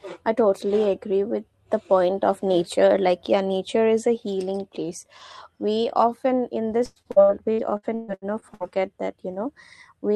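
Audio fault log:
6.85–8.63 s, repeated packet loss (robotic sound): packets stopped arriving or came too late, again and again, across this stretch of speech. The receiver covered each hole by extending the last sound it had, about 670 ms of patching in all, while roughly 480 ms is simply missing, with the longest gap at 132 ms. Those stretched fragments, packed close together, make the speech choppy, with pieces missing.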